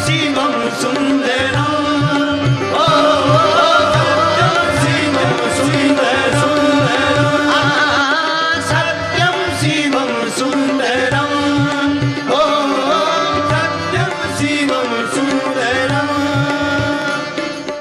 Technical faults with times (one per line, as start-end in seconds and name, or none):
2.88-8.02 doubled audio track